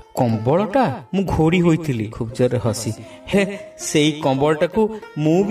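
At 2.12 s and again at 3.32 s, compressed frames are skipped. The audio jumps ahead by about 150 ms each time, which fits roughly seven missing or rejected frames of 23.2 ms. Each join is heard as a sudden break in the sound.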